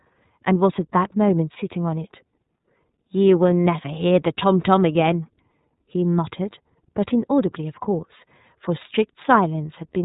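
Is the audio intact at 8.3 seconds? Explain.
No. The iLBC codec affects 8.3 seconds and the whole clip. Each frame, consistent with iLBC's 30 ms mode, codes its speech excitation independently, and as a narrowband codec it lets nothing above 3.8 kHz survive, so the voice sounds plainly rough, muffled and synthetic.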